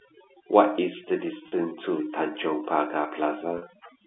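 The clip is telephone speech carried over the G.711 line, with its band running from about 250 Hz to 3.5 kHz. Overdone noise removal runs through the whole clip. The suppressor was set too hard. Any frequency band close to its noise estimate gets pushed down or switched off. Quiet parts of the voice fall under that threshold too. So the background drops and breaks up into small twinkling specks. There is packet loss with pitch repetition at 1.48 s and again at 3.58 s. Each gap lasts about 40 ms, which fits two 20 ms packets going missing. The receiver fills the hole by repeating the last pitch period. These gaps are short, so the repeat never fades out fully. Each one sounds like a brief held, buzzy tone before the speech picks up again.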